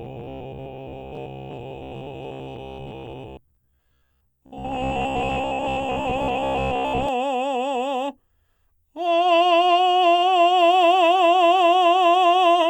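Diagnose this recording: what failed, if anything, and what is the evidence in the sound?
From 0.02 to 7.09 s, robotic sound from repeated short buffers turns the music into a rigid metallic buzz at 66.8 Hz. A starved driver or buffer stage is likely replaying its last 15 ms block and skipping most material. A spectrogram shows harmonics spaced 66.8 Hz apart; the waveform shows identical 15 ms cycles.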